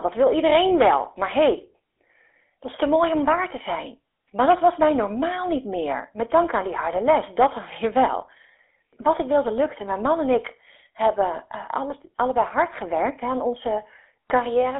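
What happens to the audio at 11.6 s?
At 11.6 s the speech carries the GSM full-rate codec distortion present throughout. The vocal tract is modelled and driven by a thinned, regularly spaced pulse excitation, leaving a plainly audible buzzy, gravelly roughness, a telephone band of about 300 Hz to 3.6 kHz, and nothing above 3.8 kHz, consistent with a 13 kbps GSM stream.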